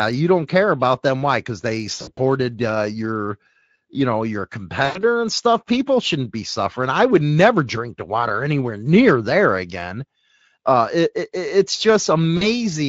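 VoIP packet loss concealed by the speech codec occurs at 2.01–2.20 s, before "uh your you know"; at 4.85–4.99 s, between "your you know your" and "and stuff"; and at 12.37–12.48 s, after "it it it's". About 100 ms, 100 ms and 40 ms of audio went missing, and the decoder extrapolated buzzy or noisy, fading sound instead of leaving silent gaps.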